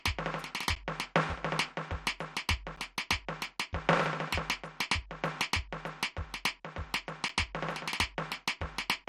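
Right from the start the music sounds dull and gurgly, with nothing above 14.4 kHz. That's likely MP2 compression at a low rate, something like 64 kbps, starving the upper sub-bands of bits. On top of that there's a block of digital silence at 0.75, 2.76 and 7.28 s, where about 10 ms of sound cuts out and comes back abruptly, so each one ticks.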